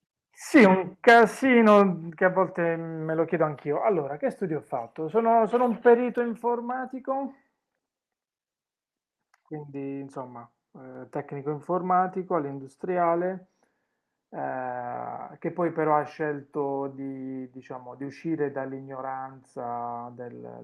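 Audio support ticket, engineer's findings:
Sudden level drop at 2.1 s, about 5 dB, voice and background together. Likely microphone volume stepped down by the call software's input gain control, lowering device capture level in one step. Level stays lower afterwards; audio band-limited near 12 kHz by the call codec.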